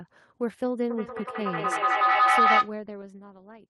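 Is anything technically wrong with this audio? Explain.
Yes. There is a feedback howl from 0.9 to 2.78 s. A microphone is picking up a loudspeaker carrying the same call, and each trip around that loop comes back louder than the last. The repeats build instead of dying away, and they narrow onto the frequency the loop favours, around 1.5 kHz here. The result is a rising tone that pulses roughly every fifth of a second and peaks at about 9 dB above the speech before it cuts off.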